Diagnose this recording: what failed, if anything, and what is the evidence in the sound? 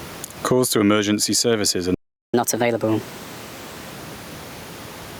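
Gain pumping runs throughout, at the input stage. The gain swings about 20 dB, pulling down under loud speech. The likely cause is excessive mic gain driving a fast limiter.

A playback stall occurs from 1.94 to 2.34 s. Speech cuts to silence for 0.39 s mid-flow. The likely cause is the player's buffer running dry.

Catch-up at higher speed follows, from 2.34 to 3.91 s. Playback runs at 1.25 times normal speed, with pitch raised about four semitones. The player is resampling its backlog to recover the lost time.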